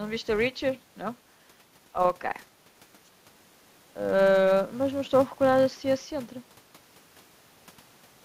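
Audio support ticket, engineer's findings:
Filter restarted on every block: steady buzz at 375 Hz under the speech for the whole clip, rising and falling with level. Filter stage likely dropping its state each block, so every block starts with a small tick. Rate fits 128-sample blocks.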